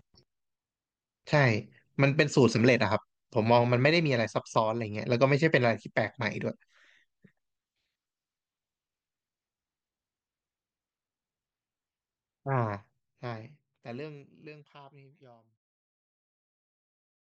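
No technical faults are audible.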